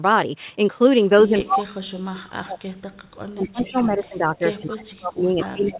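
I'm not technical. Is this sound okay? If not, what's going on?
No. From 1.13 to 2.83 s, and again from 3.32 s to the end, the voice keeps dipping, sometimes nearly to silence. That's speech suppressed in double talk: both people likely talked at once, and the call's echo canceller turned this voice down along with the echo.

There's also echo leak at 3.64 to 3.84 s and 4.04 to 4.08 s: faint scraps of the voice come back about 0.23 s late. The far end's echo canceller likely didn't catch everything its loudspeaker put into its microphone. The dull, phone-like tone, with nothing above 4 kHz, is just the call line.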